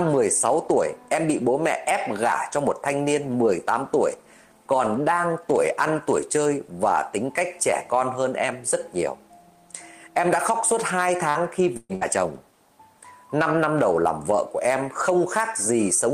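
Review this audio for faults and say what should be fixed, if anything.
Three bursts of packet loss land close together: 11.29 to 11.38 s, 11.77 to 11.92 s, and 11.95 to 12.04 s. Each time, packets went missing and the receiver papered over the hole by extending the last bit of sound and fading it, so you hear a brief smeared stretch, about 54, 125 and 58 ms long. Then the sound jumps ahead, skipping roughly 60, 120 and 60 ms of real audio. The middle one also drops briefly into about 10 ms of silence. A deeper jitter buffer or some forward error correction on the link should keep bursts like these from reaching the listener.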